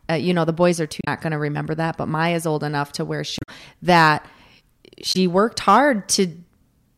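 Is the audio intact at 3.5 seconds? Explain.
No, not quite. Right after "old enough to where" there's damaged data in the compressed stream, from about 3.38 to 3.49 s, ending just before 3.5 s. Some of the coded frames there got corrupted, so the decoder misread them, lost its place, and had to hunt for the next valid frame header before it could carry on. You hear that stretch as a short, harsh chirp or blip cutting into the speech.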